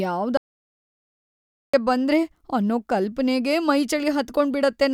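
From 0.37 to 1.74 s, an audio dropout to silence: speech stops dead, leaving silence without room tone, likely from a momentarily lost input.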